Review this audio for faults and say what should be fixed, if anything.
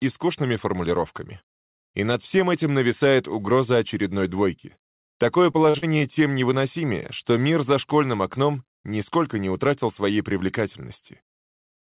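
Repeated packet loss (robotic sound) occurs from 5.52 to 6.02 s. Over that half second, packets kept arriving late or not at all, opening four short holes totalling about 120 ms, the longest 42 ms. Each hole was patched by stretching the preceding sound forward, so roughly a quarter of the stretch is synthetic fill. The result is a choppy burst, band-limited to 4 kHz by the G.711 call path. A deeper jitter buffer and forward error correction or redundancy on the link would prevent it.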